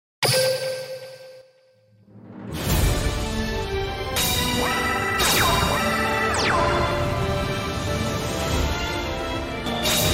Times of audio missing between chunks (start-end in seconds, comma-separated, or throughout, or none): 1.41, 4.16, 6.91, 9.66